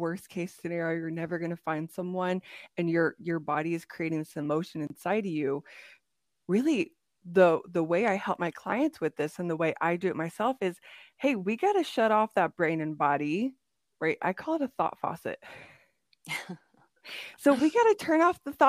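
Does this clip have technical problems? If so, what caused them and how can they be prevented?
Yes. At 4.87 s the speech drops out for about 30 ms, ending at 4.90 s. This is a gap at a join of encoded pieces. The audio was encoded in separate sections and then butted together untrimmed. Each encoder pass leaves silence at its start and padding in its final frame, so the seam carries a short hole. Its edges are smeared by the codec. The speech then resumes where it stopped. To prevent it, encode the whole recording in one pass, or trim each piece's encoder delay and padding before joining.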